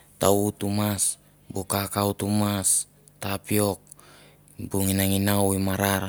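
Nothing in this stretch of speech stands out as a technical fault, so there's nothing to point to at any moment along the way.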